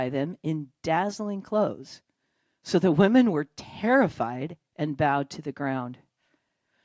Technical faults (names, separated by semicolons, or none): none